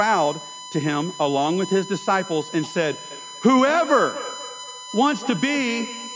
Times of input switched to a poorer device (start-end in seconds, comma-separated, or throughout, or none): none